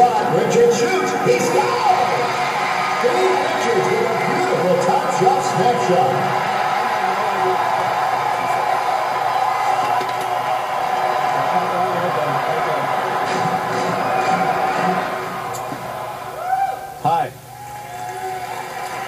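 From 0.62 s to 18.6 s, a click recurs every 0.6 s. These are likely clock drift buffer slips: mismatched clocks periodically drop or repeat a few samples.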